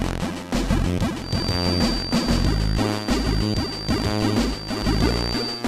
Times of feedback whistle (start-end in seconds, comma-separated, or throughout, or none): 1.16-5.68